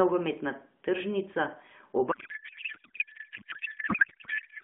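At 2.12 s the receiver starts unpacking the AMR payload with the wrong layout, a codec payload misread that fits octet-aligned frames being read as bandwidth-efficient. The decoder keeps finding plausible frames, but every parameter sits in the wrong field. Until the end of the clip, the speech is replaced by garbled noise and warbling tones that barely track it. Before this point the light AMR narrowband coding is audible, with the 150 to 3500 Hz line band.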